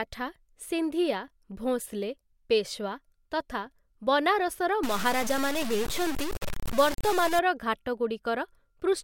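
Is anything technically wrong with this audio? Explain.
Yes. From about 4.83 to 7.39 s the speech turns coarse and grainy: low bit depth without dither. The likely cause is truncation to very few bits, which fits something like 4-bit words, putting the error only around 10 dB below the speech, so quiet stretches sputter and crackle along with it.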